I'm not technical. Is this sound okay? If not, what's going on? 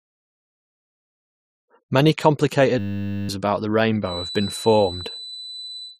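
No, there are two problems. From 2.79 to 3.29 s, right before "about the", there's a system hang loop: the computer briefly froze while the sound hardware replayed one tiny 10 ms scrap over and over, so you hear a flat buzz at 100 Hz and lose about half a second of speech.

Then from 4.0 s, just after "about the", to the end, a thin steady whistle at 4 kHz sits quietly behind the voice, slowly swelling and fading. That's a feedback whistle, likely the speaker's sound leaking back into the microphone and hovering just short of a full howl.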